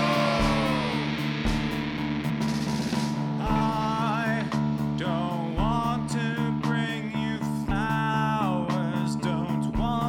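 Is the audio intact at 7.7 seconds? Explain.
No, at 7.70 s a couple of compressed frames are skipped, jumping ahead about 50 ms, with the overlapping frames leaving a short smeared blip rather than a click.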